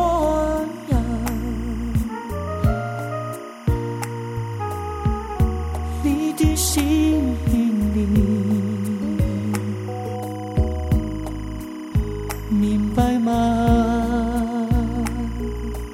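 Timecode bleed runs throughout: a 25 frames-per-second linear timecode, switching near 1 and 2 kHz, leaks in about 25 dB below the sound as a steady chirping warble.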